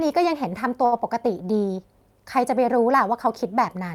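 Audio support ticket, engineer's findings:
Short stall from a late packet, 0.85–0.94 s. Sound held about 66 ms, faint buzz or dip on the stretched bit. Jitter buffer ran dry waiting on a late packet, receiver extended the last sound, then resumed where it left off. Nothing lost, just pushed back 66 ms. Points at network jitter outrunning buffer depth, so worth checking the buffer's adaptation settings on the receive side.

Short concealed packet loss, 0.98–1.01 s. Brief smear or wobble right after the stall. About 20 ms never made it to the decoder, and concealment papered over it by carrying the prior sound forward roughly 10 ms before blending back into the real signal. Arriving this close behind the late packet, it looks like the same rough patch on the network path, so I'd start with loss stats on that link.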